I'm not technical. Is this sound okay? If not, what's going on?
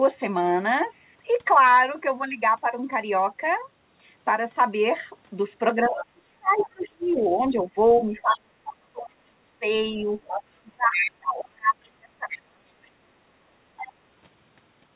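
No, there are two problems, both from a call.

First, speech suppressed in double talk. From about 5.8 to 7.7 seconds, and again from 8.0 to 13.0 seconds, the voice keeps dipping way down, sometimes almost to nothing. This happens in pieces, adding up to roughly a second and a half in the first stretch and about four seconds in the second. The likely cause is both people talking at once: the call software couldn't tell the speaker apart from the other person's voice coming out of the loudspeaker, so it turned everything down together.

Second, the other side's voice leaking through. You can hear a second, fainter voice sneaking in at 5.83 to 6.05, 6.57 to 7.12, 10.25 to 10.43, 10.92 to 11.11, 12.30 to 12.38 and 13.78 to 13.92 seconds. It's usually quite a bit quieter than the main voice, but the one around 10.9 seconds is nearly as loud. That's likely the other caller playing from the loudspeaker and getting picked up again by the microphone, which the echo removal didn't fully clean out. 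The audio also has the narrow, phone-like sound of a normal call line.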